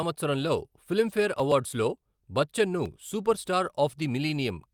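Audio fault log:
No audible faults in this speech recording.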